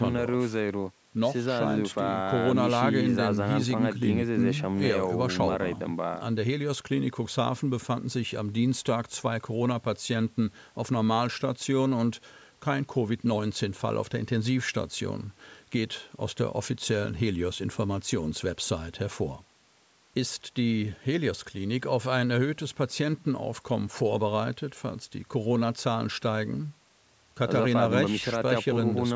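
Speech recorded through a call's microphone processing, with the lowest bass trimmed by its high-pass filter and nothing above 8 kHz, shows no technical fault.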